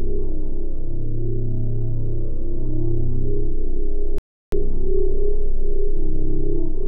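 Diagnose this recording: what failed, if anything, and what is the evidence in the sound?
An audio dropout to silence occurs from 4.18 s to 4.52 s, removing about 0.34 s of sound. The signal stops mid-flow and resumes just as abruptly, and the gap is silent with no residual room tone, so whatever occurred in that span is unrecoverable. The stage is most likely the input path, where the source disconnected, a link failed or a mute was engaged while the recorder kept writing silence.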